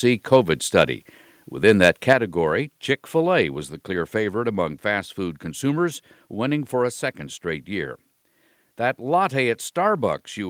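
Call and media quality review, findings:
Microphone overload, 0.33–0.37 s and 1.68–2.13 s. Harsh, crackly edge on the loudest syllables; peak tops flattened. Likely cause: mic input gain set too high, driving peaks into the converter's ceiling, by about 2 dB on the first burst and about 3 dB on the second. The short first burst clips a few percent of its samples. The longer second stretch clips under one percent, spread across nearly half a second.

Microphone volume stepped down, 2.13 s. Sudden drop in level of both voice and background, landing right at the end of the second distorted stretch. Likely cause: call software detecting the overload and cutting the device's input volume in a single step of about 6 dB rather than ramping it, so the change is heard as an abrupt jump, not a fade.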